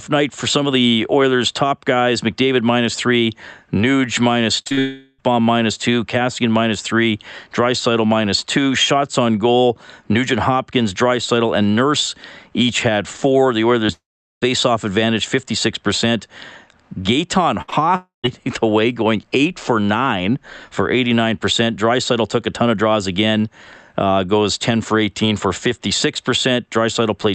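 From 4.61 to 4.79 s the speech breaks up with repeated packet loss. Three gaps fall close together, the longest 44 ms. About two thirds of that stretch is patched by continuing earlier sound. The result is choppy and robotic.

A long network dropout follows, from 4.79 to 5.21 s. About 400 ms of speech never arrives. The receiver keeps extending the last sound as a fading buzz or hiss, with no true silence. Speech returns at "minus two". A likely cause is a network stall.

At 13.87 to 13.90 s comes a short concealed packet loss. About 20 ms is missing. The hole is bridged by extending the preceding sound, so it registers as a brief smear or wobble.

Another long network dropout runs from 13.92 to 14.44 s. About 500 ms is lost. The fill decays fast, leaving roughly 410 ms of silence before the audio resumes. This is likely caused by the connection stalling.

From 17.62 to 17.70 s a burst of packet loss removes about 60 ms. 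The last sound is held and faded. Then a short concealed packet loss follows straight on, from 17.70 to 17.74 s, with about 20 ms more missing.

The third long network dropout spans 17.96 to 18.26 s. About 280 ms is gone. The held sound dies away into about 140 ms of silence. Speech comes back at "the way going eight". Likely cause: a brief network outage.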